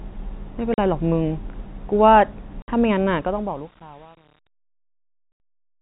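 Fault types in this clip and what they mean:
packet loss filled with silence: The telephone-band speech drops abruptly into dead holes at 0.74, 2.62 and 5.32 s, lasting 40, 60 and 80 ms, each with hard edges. Lost packets were replaced with silence, and those gap lengths fit a 20 ms packet.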